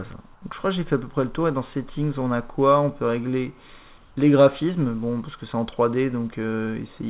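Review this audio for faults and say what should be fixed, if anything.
From 0.34 to 0.42 s, roughly 80 ms, the real background gives way to a flat, featureless hiss at the same level. That's comfort noise in place of the background, likely because discontinuous transmission treated this quiet stretch, about 34 dB below the loud parts, as silence, so the receiver filled the gap with synthetic noise. Disabling DTX on the sending side would keep the actual background flowing through those pauses.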